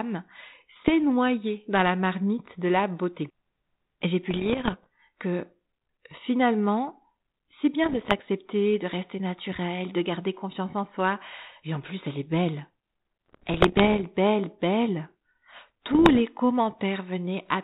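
Bursts of bit errors on an ADPCM link turn up at 0.76–0.90, 4.30–4.86, 7.84–8.21, 13.26–14.04 and 15.88–16.20 s, on speech whose band stops at 4 kHz, which fits a 32 kbit/s G.726 path. A flipped bit (around one in a hundred here, fewer at 7.84 and 15.88 s) throws off the decoder's step size and prediction, so each error rings on briefly. You hear pops, gritty rasp and brief jumps in level, with the longest stretch at 13.26 s.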